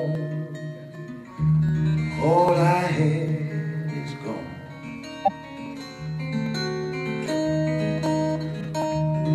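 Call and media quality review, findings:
Clock drift buffer slips. Regular click every 0.8 s, 0.15 s to 8.8 s, about ten in all. Short ticks, present while signal runs. Likely cause: two devices on independent clocks, mismatch around 700 ppm. Buffer between them drifts until a few dozen samples are dropped or repeated. Steady interval points to constant drift, not network jitter. Probable component: capture or playback device boundary, no shared clock or resampler.

Compressed frames skipped. Two brief jumps. First at 5.25 to 5.31 s, roughly 20 ms of audio missing. Second at 8.60 to 8.65 s, roughly 40 ms missing. Sound jumps ahead at each. Probable component: decoder, discarding damaged frames or missing them from the stream.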